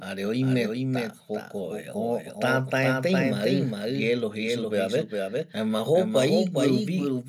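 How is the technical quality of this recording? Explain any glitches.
The recording has one fault. A doubled audio track runs throughout, likely from a second, slower capture path, so a copy about 5 dB quieter trails each phrase by roughly 0.4 s.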